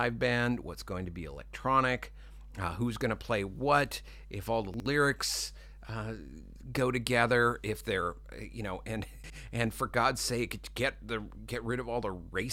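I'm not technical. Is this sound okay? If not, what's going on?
No. Mains hum runs through the whole clip: a steady low buzz at 50 Hz sits fairly prominently under the speech. Electricity from the power supply is leaking into the recording, typically through a ground loop or a nearby transformer.

Chunks out of order at 4.74 to 4.86 s and again at 9.24 to 9.36 s: a 60 ms slice of sound arrived one slot late and played after the slice meant to follow it. Nothing is missing, but the order is scrambled, so each spot sounds briefly jumbled.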